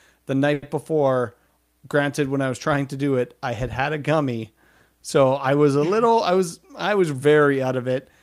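Speech, with a short stall from a late packet at 0.53 to 0.64 s. About 90 ms of stretched sound fills the gap, then speech resumes with nothing lost.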